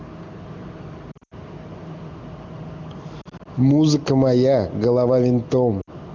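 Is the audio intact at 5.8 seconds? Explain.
No. Lost AMR speech frames cut into the sound from 5.81 to 5.90 s. The gap runs about 60 ms, which fits three missing 20 ms frames. Radio errors left those frames unreadable. The AMR-WB decoder filled in by repeating the last good pitch and vocal tract settings while lowering the gain. The sound drops to near silence within two frames, as wideband concealment does. It returns weak or rough for a moment afterwards.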